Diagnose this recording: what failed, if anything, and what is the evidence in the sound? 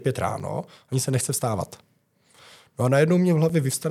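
Two brief disturbances cut through the speech, one at 0.40 s and another at 3.49 s, each only a few milliseconds long. This is damaged data in a compressed stream, a fault at the codec stage: corrupted bytes made the decoder misread those frames, lose sync, and skip forward to the next valid frame header.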